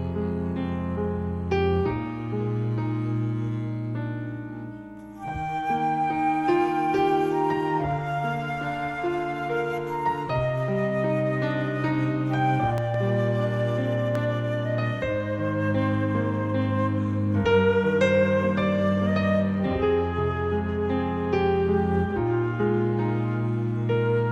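At 12.78 s a loud pop strikes, followed by a second one before 12.97 s. Both jump about 10 dB above the surrounding sound. At 14.15 to 14.18 s a single pop of similar strength follows. The likely cause is a sudden voltage step or pulse entering the signal, from a plug, switch, static discharge or driver glitch. Each is heard as a sharp thump laid on top, while the sound continues underneath.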